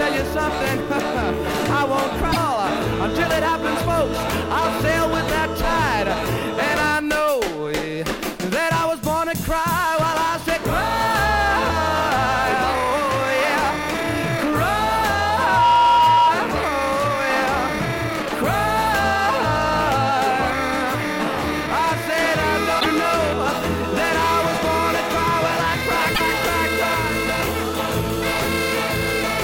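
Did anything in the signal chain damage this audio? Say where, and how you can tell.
Yes. Three stages left marks. The codec or storage stage shows damaged data in the compressed stream at 2.29–2.37 s, 22.77–22.86 s and 26.11–26.21 s. Each is a brief glitch lasting roughly 80 to 100 ms. That is a decoder losing frame sync on corrupted bytes and hunting for the next header. A network dropout would leave a gap or smeared concealment rather than a chirp-and-skip.

At 3.48 s, 12.76 s and 25.20 s there are single sharp clicks. Each is a thin vertical line across the spectrum with nothing audibly missing on either side. The cause is likely dropped samples at the driver or buffer stage, where a tiny fraction of a millisecond vanishes and the waveform steps abruptly. These clicks are far shorter than the codec squawks and carry no tonal colour or jump in the sound.

From 15.19 to 16.38 s a loudspeaker feedback squeal appears in the acoustic path around playback and capture. 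A tone at 956 Hz swells over about half a second until it sits about 5 dB above the programme, then stops. The steady single frequency and the self-reinforcing build-up distinguish it from electrical hum, which starts at full level on mains harmonics, and from digital glitches.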